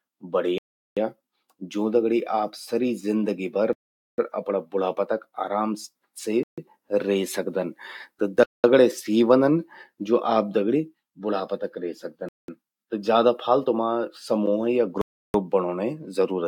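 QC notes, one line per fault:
0.58–0.97 s, 3.73–4.18 s, 6.43–6.58 s, 8.43–8.64 s, 12.29–12.48 s, 15.01–15.34 s: Bluetooth stall. Radio interference likely delayed packets on the wireless link, so the receiver's buffer emptied and playback halted until retransmitted audio arrived. Each time the speech drops abruptly to dead silence lasting 0.39, 0.45, 0.14, 0.21, 0.20 and 0.33 s respectively, then resumes without fade.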